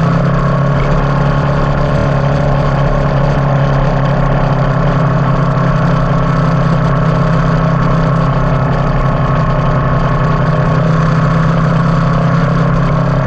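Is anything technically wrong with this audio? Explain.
Yes. The audio has two technical faults.

Throughout the clip, the sound is watery and swirly, with metallic chirps on bright sounds and smeared attacks. This is likely MP3 compression at a low bitrate, around 64 kbps. The encoder cuts the treble and drops weak detail, which flickers from frame to frame.

There are also repeated frames, in two places. From 1.98 to 2.05 s, a 26.1 ms block plays three extra times, adding 78.4 ms. At 12.92 s, the same-sized block plays once more, adding 26.1 ms. The block length fits a single MP3 frame. Each spot is heard as a brief stutter.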